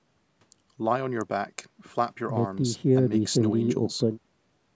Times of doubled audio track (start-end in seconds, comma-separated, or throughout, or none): none